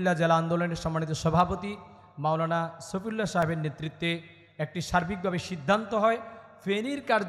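At 3.42 s the output path dropped a block of samples and wrote zeros in their place, leaving a block of digital silence about 2.2 ms long. Because the signal falls straight to zero and jumps back without any fade, each edge is a hard discontinuity, and at this length the two edges merge into a single sharp tick rather than an audible gap in the sound.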